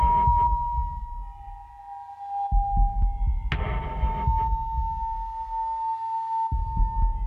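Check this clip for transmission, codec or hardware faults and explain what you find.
Nothing in the clip points to a transmission, codec or hardware fault. The audio holds steady throughout, with no events that call for explanation.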